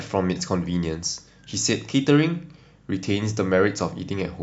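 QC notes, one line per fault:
Nothing to flag here; the speech comes through without any technical faults I could hear.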